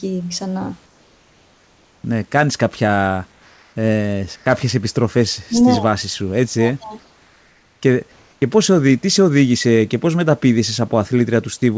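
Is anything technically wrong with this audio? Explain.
Yes. In the pauses of this speech clip, the real room background is repeatedly swapped for comfort noise in place of the background. This happens at 0.86–2.04 s (ending just before "κάνεις κάποια"), 3.32–3.76 s (right after "κάνεις κάποια"), 4.36–4.46 s, 7.00–7.82 s, and 8.12–8.42 s (ending just before "πώς τι σε οδήγησε").

The likely cause is discontinuous transmission. The sender goes quiet when no speech is detected, and the receiver fills the gap with synthesized noise of the RFC 3389 kind. The room's own noise, sitting about 39 dB under the speech, turns into a flat, characterless wash about 1–3 dB quieter. On a spectrogram, the textured background becomes a smooth, uniform band in each pause, capped at 8 kHz like the rest of the G.722 call audio. On the waveform, the noise floor steps down slightly at each pause.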